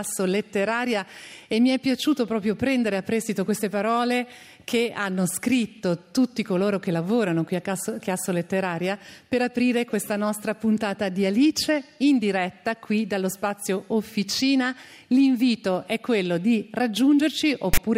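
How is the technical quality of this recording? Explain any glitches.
There's one clear glitch, right at the very end. From 17.74 to 17.78 s you get file tags played as audio: a block of text metadata gets read as if it were samples, so those character bytes come out as a loud, lopsided rasp with hard edges, followed by a moment of dead silence where the zero padding sits.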